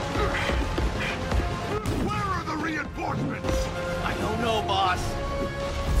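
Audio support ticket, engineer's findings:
Sudden gain jump, 1.78 s to 3.44 s. Level drops by about 10 dB in one step, background noise falling with it, then returns abruptly at 3.44 s. Likely cause: digital gain stage or bit shift applied without a ramp.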